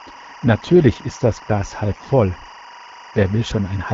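Speech runs throughout the clip, carried over an AMR wideband (HD Voice) codec, probably at a rate around 12.65 kbit/s given its light coding texture. A steady chirping warble sits behind the whole clip, around 20 dB below the speech. This is timecode bleed: linear timecode from an adjacent track or cable has leaked into the audio. Its biphase square wave flips between tones near 1 kHz and 2 kHz, and its rhythm is consistent with 23.976 frames-per-second code. From 1.92 to 2.06 s the voice briefly turns hoarse, scratchy and gargly while keeping roughly its pitch and level. These are AMR bit errors, affecting what sounds like about six 20 ms frames at a heavy error rate, on the order of a tenth of the bits. The weakly protected bits were corrupted while the frame checks on the critical bits still passed. The decoder therefore misplaced its excitation pulses and used wrong fine gain, pitch and spectral values instead of muting the frames.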